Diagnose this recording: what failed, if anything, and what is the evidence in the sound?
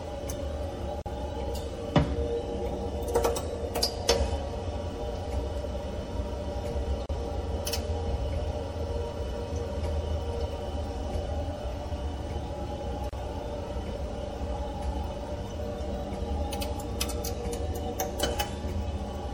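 MP3 compression throughout, at the codec stage: plainly audible watery, swirling artefacts as weak frequency lines drop in and out between frames, likely from a low bitrate around 64 kbps.

Gaps at joins of encoded pieces at 1.02, 7.06 and 13.09 s, six seconds apart, lasting 42, 34 and 34 ms: separately encoded segments were spliced untrimmed, keeping encoder start delay and end padding.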